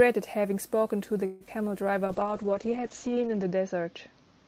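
At 1.25 s the speech stalls for about 0.17 s, to 1.43 s. The last sound is stretched into a fading buzz rather than dropping to silence, and then the speech resumes exactly where it left off, with nothing skipped. This is a call audio freeze. The likely cause is packets held up in transit, so the jitter buffer ran dry and the receiver synthesised about 150 ms of filler. The rest of the clip plays roughly 150 ms later than before.

Shortly after, at 1.47 to 1.49 s, comes a short concealed packet loss. About 20 ms of audio never reached the decoder in time, and the receiver patched the hole by extending the preceding sound for a few milliseconds before blending back into real audio. It is heard as a brief smear or wobble, too short to be called a dropout.

From 2.05 s to the end, a call bitrate drop takes hold. The encoder rate falls from 40 kbps to 8 kbps and stays at its lowest for about 1.4 s. 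Opus codes much more coarsely at that rate and narrows the audio bandwidth from 20 kHz to 8 kHz. The speech turns rough and watery, and it loses its top end, sounding muffled and dull compared with the first two seconds.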